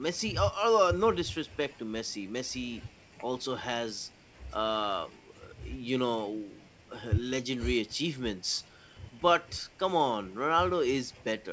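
No technical faults are audible.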